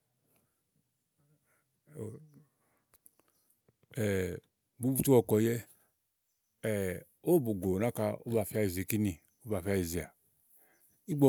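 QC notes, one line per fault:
Nothing to flag on this speech clip, it's all good to go as far as faults are concerned.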